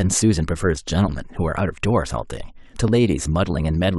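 Speech, with one overlap between stream segments at 2.88 s. Overlapping timestamps caused about 6 ms to be trimmed, so the waveform jumps, heard as a tiny skip.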